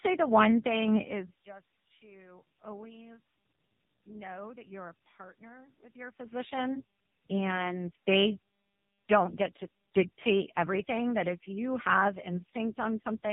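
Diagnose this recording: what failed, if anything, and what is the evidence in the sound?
What failed is tandem speech coding at the codec stage, running the whole way through. The speech has a roughened, warbly, muffled quality, with nothing above 3.8 kHz. That points to two lossy speech codecs in a row, likely GSM full rate and then AMR-NB, the second re-coding the first one's damage.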